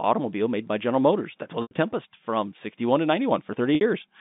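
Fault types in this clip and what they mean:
Packet loss with pitch repetition: At 1.62 s and 3.75 s the sound briefly turns into a held, buzzy tone that fades into silence, in gaps of about 90 ms and 60 ms, before the audio resumes with a short cross-fade. The receiver lost packets (the gaps fit three and two 30 ms packets) and filled each hole by repeating the last pitch period, fading it down over about 50 ms. The narrow telephone band of the G.711 line can be heard under it.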